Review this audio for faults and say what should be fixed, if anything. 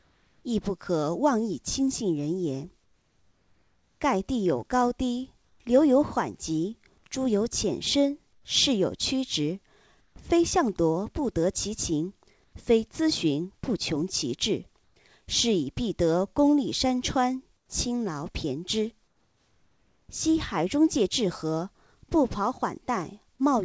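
Comfort noise replaces the background in the pauses at 0.00–0.44, 2.84–5.60, 8.33–10.16, 12.44–12.53, 14.84–14.96 and 17.57–20.09 s. The real room sound gives way to a flat, featureless hiss. Where it can be measured, that hiss sits about 1 to 3 dB below the true background, and the background itself is about 41 to 44 dB under the loud parts. The likely cause is discontinuous transmission. The sender goes quiet when it detects no speech, and the receiver fills the gap with synthetic noise. Nothing above 8 kHz reaches the listener, which points to G.722 at 64 kbps. To prevent the swap, disable DTX or voice-activity detection on the sending side.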